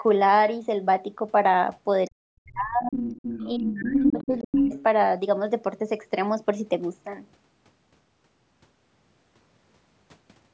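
From 2.07 to 2.17 s and again from 2.33 to 2.96 s, speech is suppressed in double talk. The echo canceller likely mistook the overlap for loudspeaker echo and pulled the talker down, so the voice drops out almost entirely, by roughly 40 dB. A milder dip of around 25 dB follows from 3.55 to 4.73 s. Overlapping this, the other side's voice leaks through, likely because echo cancellation left residue in the microphone signal. It shows up from 2.92 to 3.69 s about 10 dB under the talker, from 3.85 to 4.36 s about 5 dB under, and from 4.52 to 4.84 s at roughly equal level, as a second voice competing with the first.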